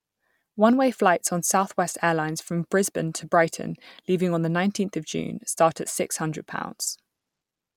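Nothing here stands out as a technical fault; the speech carries on without any glitch, dropout or disturbance worth flagging.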